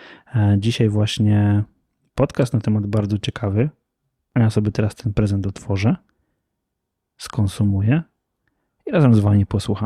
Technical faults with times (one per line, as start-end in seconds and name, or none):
none